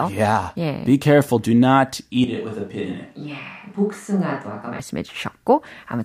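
A speech recording in which, from 2.24 s to 4.80 s, the sound suddenly turns roomy and hollow, loses bass, and drops about 5 dB, with room noise near 35 dB below the speech. This is a switch to a distant microphone, likely because the close microphone dropped out. The waveform steps down abruptly at both boundaries, and a spectrogram shows weaker low frequencies, smeared reverberant tails and a raised noise floor.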